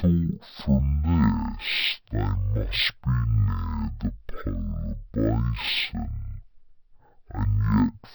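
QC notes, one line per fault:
throughout: stereo read as mono. The speech runs at half speed and sits a full octave low (0.5x, -12 semitones) because interleaved left and right samples are taken in turn as one channel, doubling the sample count. Unlike a plain sample-rate mismatch, which would also slow and lower the sound, this leaves a faint mirrored copy of the sound in the upper half of the spectrum, above the dragged-out speech.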